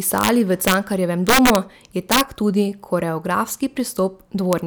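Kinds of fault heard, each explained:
Integer overflow: loud speech peaks overshoot the largest integer by about 0 to 5 dB and wrap to the opposite sign, cracking violently near 0.2, 0.7, 1.3 to 1.6, 2.1 and 4.53 s; clipping would merely flatten those peaks, sounding duller.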